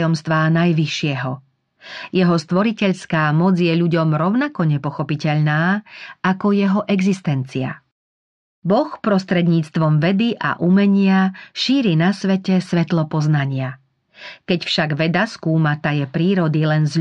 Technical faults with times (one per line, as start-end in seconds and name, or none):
none